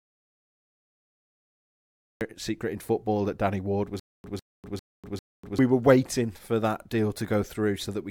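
The clip opens in an audio dropout to silence. It is already under way at 0.0 s and lasts until 2.21 s. The gap is pure digital silence, with no room tone at all. Speech then enters abruptly with "secret in football that". The likely cause is a lost input, such as a dropped device or link, while the recorder kept writing zeros. Whatever was spoken before 2.21 s is gone.

From 4.00 s to 5.59 s there is a stutter with silent gaps. A 153 ms fragment of speech plays, then about 245 ms of dead silence follows. This repeats four times, on a steady 398 ms cycle. Normal speech resumes with "were waiting for that". The likely cause is a stalled player or stream that replayed its last buffer on each retry, then ran empty. The speech due in that span is lost.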